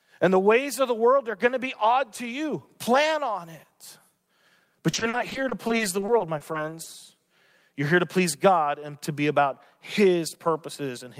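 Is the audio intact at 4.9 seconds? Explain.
No. At 4.91 s a stretch of repeated packet loss begins and runs to 6.88 s. Over those two seconds the stream keeps dropping short chunks of audio, the longest gap about 40 ms. Each hole is patched by stretching the sound that came just before it, which covers about 16% of the span. The speech turns choppy, with brief pieces missing.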